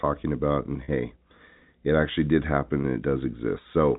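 At 0.84 s there is packet loss with pitch repetition. About 40 ms of audio is missing, which fits two lost 20 ms packets. The receiver fills the gap by repeating the last pitch period, so the speech briefly holds on a slightly buzzy tone before resuming. At 2.82 s, just after "it actually did happen", a shorter 20 ms loss is bridged the same way. The G.711 telephone band stays audible throughout.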